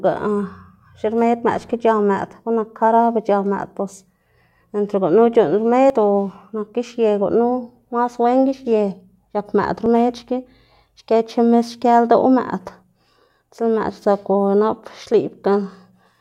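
At 5.9 s and again at 9.86 s the speech gives an abrupt jump, as if a sliver of about 10 ms were cut out and the two sides butted together. The likely cause is a dropped buffer (overrun), where samples were overwritten before being read. Unlike a dropout, no silent gap opens at either point. The sound simply skips ahead.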